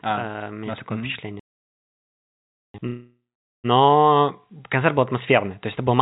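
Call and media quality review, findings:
Playback stall, 1.40 to 2.74 s, right after "у меня есть такое". Player likely starved of data or blocked thread, output held silent about 1.35 s. Speech cuts off mid-flow, resumes after the gap.

Call audio freeze, 2.87 to 3.66 s. Packets likely delayed, jitter buffer ran empty. Receiver stretched the last sound into a fading buzz or hiss, then about 0.47 s of silence. Nothing lost, but playout now sits about 0.77 s later. Band-limited to 4 kHz, consistent with G.711 A-law at 64 kbps.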